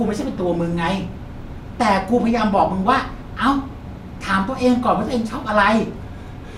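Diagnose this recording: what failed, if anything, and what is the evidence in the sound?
Weak DAB reception let bit errors slip past error correction into the MP2 codec data, producing DAB burbling: a brief burst of noise blips at 0.55 s where corrupted samples hit single sub-bands.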